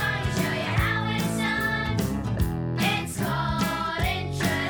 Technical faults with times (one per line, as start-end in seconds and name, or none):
none